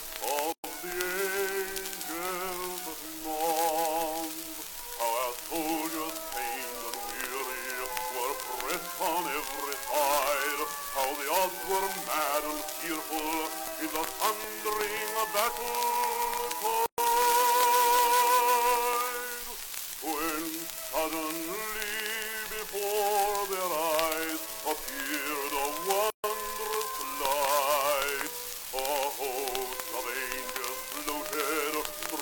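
Three short holes of silence cut into otherwise continuous sound: at 0.52 s for about 115 ms, at 16.86 s for about 120 ms, and at 26.10 s for about 137 ms. Each opens and closes abruptly, with softened edges, and the audio resumes exactly where it stopped. These are gaps at a join of encoded pieces: separately encoded segments were spliced without trimming each encoder's start-up delay and final-frame padding, so that silence remains at every seam.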